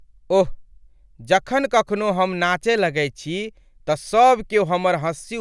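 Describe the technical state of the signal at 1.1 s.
Nothing is wrong with the signal at 1.1 s; the speech runs intact through that moment with no audible fault.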